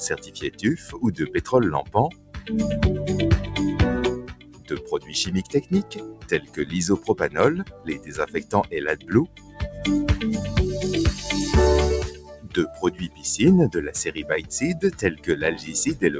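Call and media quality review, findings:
Noise suppressor applied to music or sounds, whole clip: level pumps and thins, swinging by about 15 dB. A speech-tuned suppressor reads sustained tones and tails as noise, so onsets pass and held material sinks. Waveform: envelope breathing. Spectrogram: fading horizontal bands, hard top edge at 8 kHz from the wideband call path.

Sound cut by the noise suppressor at 0.21–0.99, 1.83–2.49, 4.21–5.14, 5.46–6.65, 7.64–9.82, 12.12–13.24, 14.18–14.51 and 14.95–15.28 s: sustained or decaying passages ducked by about 9–14 dB, tails truncated. Waveform shows envelope collapsing after attacks. Spectrogram shows partials cutting off early.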